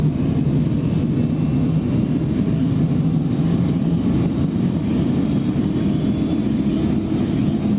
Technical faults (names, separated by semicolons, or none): gain pumping